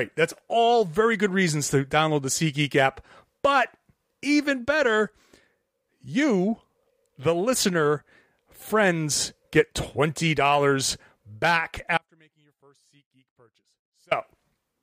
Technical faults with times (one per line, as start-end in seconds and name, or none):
11.98-14.11 audio dropout to a faint residue